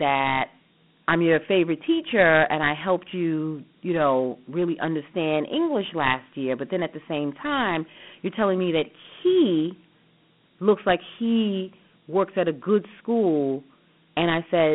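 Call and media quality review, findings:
Dialogic VOX ADPCM, throughout. Speech band-limited to about 150 Hz to 3.4 kHz, nothing above 3.9 kHz; plainly audible gritty hiss tracking the speech. 4-bit adaptive step quantisation, consistent with a 32 kbps telephony voicemail/IVR encode.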